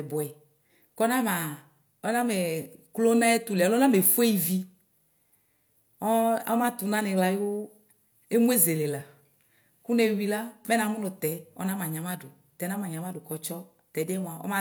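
Nothing to flag here: the speech rolls along without a single technical fault turning up anywhere in it.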